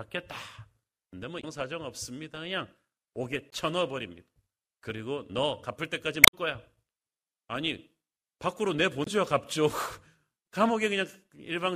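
Damaged data in the compressed stream of this speech recording made the decoder lose frame sync, briefly breaking the sound at 1.40–1.44, 3.49–3.53, 6.21–6.33 and 9.02–9.08 s.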